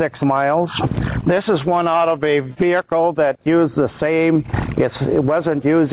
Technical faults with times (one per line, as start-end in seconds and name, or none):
0.00-5.92 gain pumping